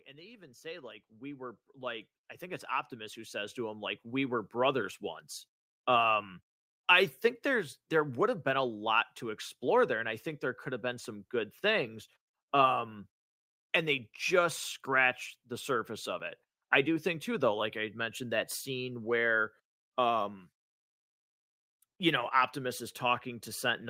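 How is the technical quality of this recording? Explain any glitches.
The one thing that stands out is automatic gain rising right at the start. From about 0.05 s to 4.82 s the level climbs steadily, by about 19 dB in total. The gain control has decided the input is too quiet and keeps turning itself up, so the voice and the room noise behind it swell together over those first few seconds rather than the voice simply getting louder.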